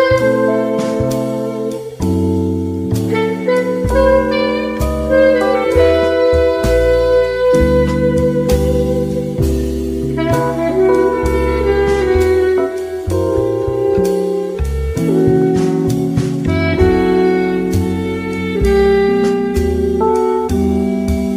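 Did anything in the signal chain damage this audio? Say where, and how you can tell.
No signal-chain damage is audible.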